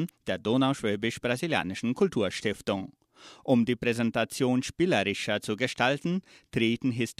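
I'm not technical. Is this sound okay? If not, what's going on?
Yes, there are no faults.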